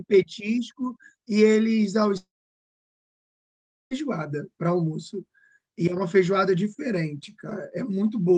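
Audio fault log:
2.17–3.93 s, long network dropout: audio likely stopped arriving; the receiver stretched the last sound into a brief fading buzz, then about 1.6 s of near silence before the speech resumed.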